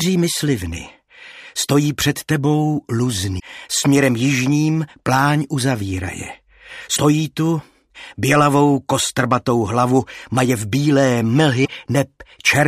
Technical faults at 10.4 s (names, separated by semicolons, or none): none